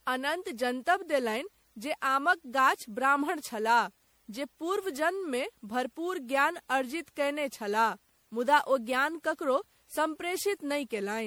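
From start to finish the speech carries generation loss, most likely from being passed through MP3 encoding around seven times at a setting consistent with 96 kbit/s. Each re-encode requantised the signal on a shifted frame grid, so the errors stacked. The result sounds swirly, hollow and smeared, with consonant attacks blurred. A spectrogram shows patchy holes and flickering gaps across the upper bands, and the waveform's transients look softened and pre-echoed.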